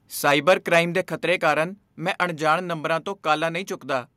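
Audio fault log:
0.27–0.79 s, microphone overload: loud speech peaks take on a harsh, crackling edge. They run about 4 dB past the converter's limit, with around one percent of samples flattened, likely because the input level was set too high.
1.02 s, microphone volume stepped down: voice and background drop together by about 3 dB in one sudden step, likely the call software cutting the input level after the overload.
1.48–1.52 s, microphone overload: a brief crackle on the peak right after "ਦੇ ਖਤਰੇ", about 1 dB over the limit. The tops are squared off, likely from excessive input gain.
2.04 s, microphone volume stepped down: a small, sudden level drop of about 1 dB just before "ਅਣਜਾਣ ਨੰਬਰਾਂ ਤੋਂ", likely another automatic reduction of the microphone input.
2.21–2.23 s, microphone overload: a short gritty snap on a peak shortly before "ਅਣਜਾਣ ਨੰਬਰਾਂ ਤੋਂ", about 2 dB over, likely the converter still clipping despite the lowered input.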